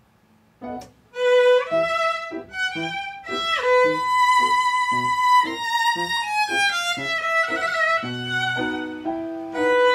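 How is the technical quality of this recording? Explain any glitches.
The recording has one clear glitch, a drift correction step, from 5.47 to 7.18 s. A clock-matching stage likely raised the playback rate in a single jump to rebalance its buffer. The sound runs 5.4% fast and rises about 90 cents, close to a semitone, then snaps back to normal pitch and speed.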